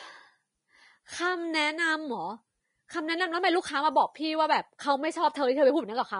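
From start to finish the speech carries plainly audible codec damage: nothing is present above 10.6 kHz, and the treble below that turns hissy and grainy, with consonant onsets smeared. The likely cause is Vorbis compression at a low rate, in line with roughly 32 kbps, where fine high-frequency detail is swapped for noise of similar energy. That noisy fill is the distinction: a plain low-pass filter would leave the remaining treble clean, not rough.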